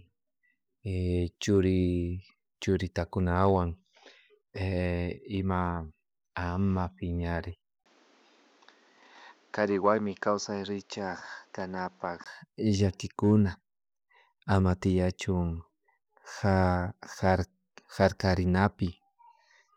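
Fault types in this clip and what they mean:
Input switched to a poorer device: from 7.84 s to 12.26 s the speech dulls and loses everything above 7.6 kHz after a 20 ms gap at 7.84 s. It drops about 5 dB and gains noise about 30 dB down, likely from a lesser microphone taking over.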